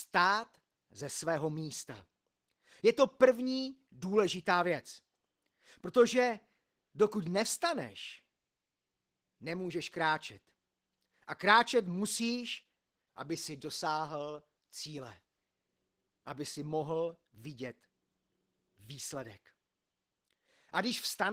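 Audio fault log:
throughout, Opus voice compression: the speech sounds hoarse, grainy and faintly robotic, with a thin, smeared haze in the highs rather than crisp sibilance. The codec runs in hybrid mode: a linear-prediction layer models the voice below 8 kHz and a transform layer fills in the upper band. Too few bits go to each, so the excitation is coded coarsely and the top end is only sketched in, which fits a bitrate around 16 kbps.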